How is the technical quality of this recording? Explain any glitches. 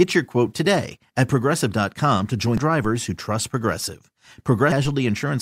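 The speech recording has three brief faults, of two kinds.

At 2.58 s, just after "to join", and again from 4.69 to 4.72 s, there is damaged data in the compressed stream. Corrupted bytes stopped the decoder from reading those frames correctly, so it lost sync and skipped ahead to the next valid frame header. The result is a short chirp or blip. The first lasts about 4 ms. The second lasts about 36 ms.

At 2.85 s there is a DC step, a sudden shift in the waveform's zero line. The instant offset produces a low thump, while the speech itself continues unchanged. The offset does not hold. It drains away the way a 5 Hz high-pass would remove it, so the thump is a single low-frequency bump rather than a lasting shift.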